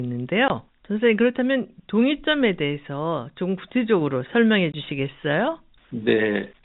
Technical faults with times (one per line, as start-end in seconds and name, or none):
0.48-0.50 packet loss filled with silence
4.72-4.74 packet loss filled with silence